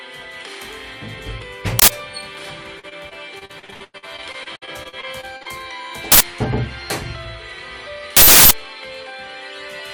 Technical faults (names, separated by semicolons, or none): uninitialised buffer; repeated packet loss (robotic sound)